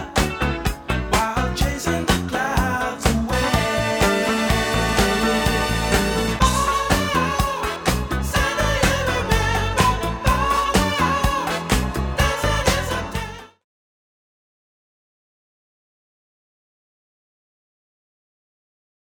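No faults to report; the only level change is an editor-style smooth fade-out beginning around 12.5 s and completing at 13.65 s, with no click or hard edge.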